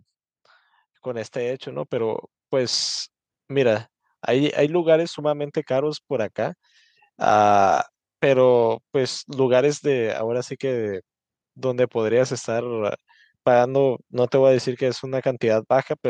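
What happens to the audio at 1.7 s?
At 1.71 s the microphone volume is stepped up: the call software judged the input too quiet and raised the device's capture gain in a single step of about 5 dB, so the speech and the background noise jump up in level together.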